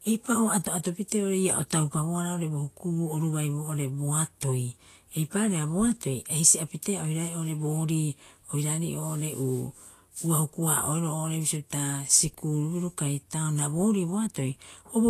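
Vorbis compression throughout: nothing is heard above 14.2 kHz, and treble detail turns to grainy hiss, likely from coarse quantisation at a bitrate near 34 kbps.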